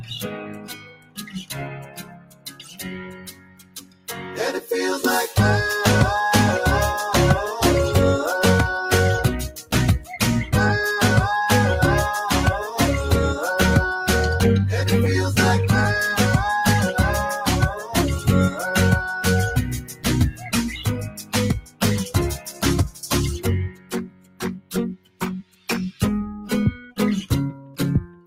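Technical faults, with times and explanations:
Throughout: noise suppressor applied to music or sounds. A speech-tuned suppressor treats steady tone and ambience as noise, so the level pumps and thins over a swing of roughly 15 dB.
0.00–4.37 s, 9.49–9.73 s, 17.74–18.62 s, 19.80–21.82 s, 22.36–23.07 s, 23.68–26.01 s, 27.61–28.26 s: sound cut by the noise suppressor. Held or decaying sound sinks by about 7 to 17 dB and tails are cut short, while sudden onsets still come through.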